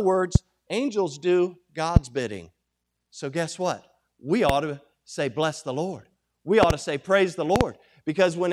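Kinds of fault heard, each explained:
Loud pop: seven sharp pops jump well above the speech at 0.35, 1.96, 4.49, 6.63 and 7.56 s, the last two as quick doubles. They're likely voltage spikes from a plug, switch or static, and the talking carries on underneath.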